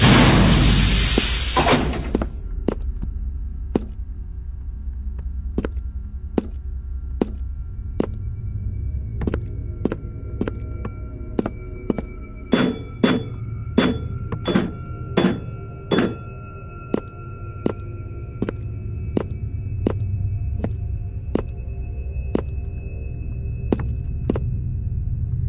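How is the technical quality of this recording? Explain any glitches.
No glitches to report: nothing in the recording stands out as a technical fault.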